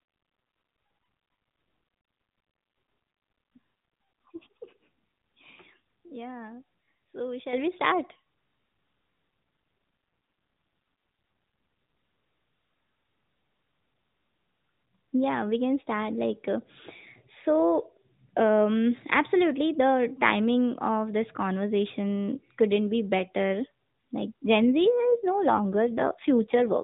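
At 7.53 s, just before "we start", the level jumps by about 8 dB in a single step: a microphone volume stepped up. The call software judged the input too quiet and raised the device gain at once rather than ramping it, so the speech and the background noise both get louder together, with no fade.

From 9.30 to 11.98 s there is an AMR rate drop. The audio stays within the narrowband channel, with nothing above 4 kHz either side of the change, and there is no gap, but the speech turns buzzier and more synthetic. That texture fits the network lowering the AMR-NB codec from 12.2 to 5.9 kbps to free bits for error protection on a weak radio link. The codec then steps back up, and the lighter, cleaner 12.2 kbps character returns. The same drop recurs from 24.66 s and lasts until the end of the clip.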